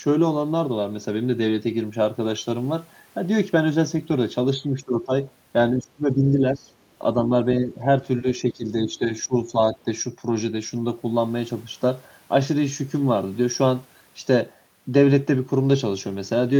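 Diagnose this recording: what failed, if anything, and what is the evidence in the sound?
Call processing: speech dips by up to roughly 15 dB at 4.72–5.13, 5.78–6.7, 7.14–7.89 and 8.21–9.86 s. This is likely speech suppressed in double talk, with the echo canceller attenuating the talker along with the echo.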